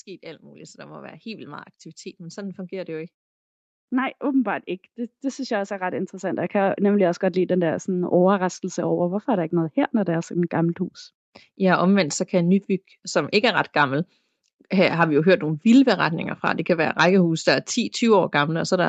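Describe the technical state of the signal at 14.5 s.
At 14.5 s the speech is intact, with no dropout, clipping or other fault, only the normal band limit of the call path, which leaves nothing above about 8 kHz.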